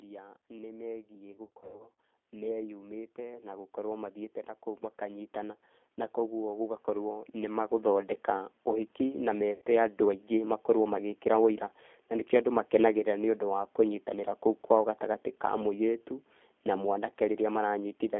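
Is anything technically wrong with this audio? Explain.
Yes. Three kinds of fault are audible in this speech.

Throughout, the G.729 codec is plainly audible. The speech is rebuilt from a vocal-tract filter, a pitch predictor and a few pulses per subframe, which fits an 8 kbit/s G.729A stream. The band is limited to roughly 250 Hz to 3.5 kHz, and the speech has a rough, slightly synthetic texture.

Automatic gain rising occurs twice, from 0.47 to 4.44 s (about 9 dB) and from 4.99 to 8.97 s (about 7 dB). In each case the gain control judged the input too quiet and ramped its gain up slowly. Voice and background swell together over several seconds.

VoIP packet loss concealed by the speech codec occurs twice. From 1.32 to 1.90 s, about 330 ms is missing in scattered gaps, with the longest about 90 ms. From 9.53 to 9.62 s there is one gap of about 90 ms. The decoder extrapolates from its last pitch and filter and lowers the gain frame by frame. 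The sound smears into a fading buzz and stays weak briefly after packets resume.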